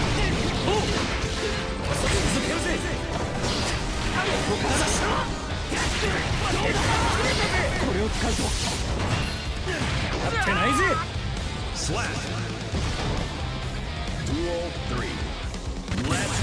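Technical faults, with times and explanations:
No technical faults are present in this clip.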